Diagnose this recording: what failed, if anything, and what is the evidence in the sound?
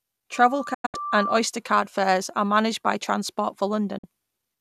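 A loudspeaker feedback squeal, an acoustic fault in the analogue path, runs from 0.33 to 1.45 s, ending just before "card fares are managed". A 1.2 kHz tone swells over roughly a second to about the level of the speech. The microphone is re-amplifying its own loudspeaker at that frequency.

A digital broadcast dropout, a reception fault, mutes the audio in short holes between 0.74 and 0.95 s, 168 ms lost across 192 ms, the longest gap 96 ms. A second gap of 48 ms falls at 3.98 s. Each edge fades within 8 ms, and the programme from those moments is gone.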